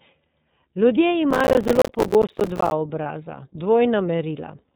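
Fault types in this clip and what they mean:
iLBC codec: The speech runs through a narrowband VoIP codec that codes each 30 ms frame on its own. Nothing above 4 kHz survives. The damage is plainly audible, with a rough, slightly synthetic edge, which fits a rate near 13.3 kbps.
Processor overload crackle: From 1.31 to 2.72 s the processor keeps missing its deadlines for very short buffers, around 5 ms each. Each miss drops in a moment of silence with hard edges. About a hundred of them in a row make a gritty tearing over the speech.
Lost iLBC frames: At 3.02 to 3.06 s one packet goes missing, which fits a single lost 30 ms frame. The decoder fills it by repeating the last pitch cycle with some noise. The result is a brief buzzy held sound, and the speech recovers at once.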